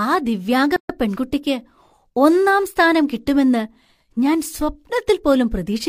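At 0.76 s, after "ആ ദിവ്യാംഗ", separately encoded pieces were joined without trimming encoder delay and end padding. This gap at a join of encoded pieces cuts the speech with a 132 ms gap, to 0.90 s. Its edges are smeared by the codec, and the speech resumes where it stopped.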